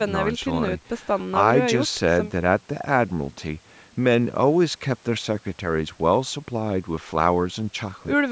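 No technical faults can be heard in this speech clip. It carries the marks of call microphone processing, with the lowest bass taken out and nothing above 8 kHz, which is how that path normally sounds.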